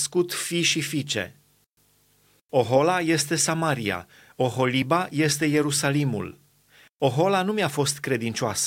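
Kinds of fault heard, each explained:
Nothing here stands out as a technical fault; the speech comes across without any glitches, dropouts or odd artefacts to point to.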